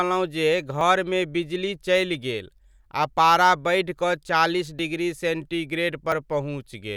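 At 0.81 s the speech jumps, skipping roughly 20 ms. Similar smaller skips of about 10 ms follow at 4.79 s and 6.12 s. No silence fills the gaps. The likely cause is a dropped buffer (overrun), where samples were overwritten before being read.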